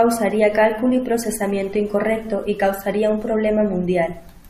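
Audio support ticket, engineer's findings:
No audible faults found on playback of the speech clip; no symptom to attribute to any component in the chain.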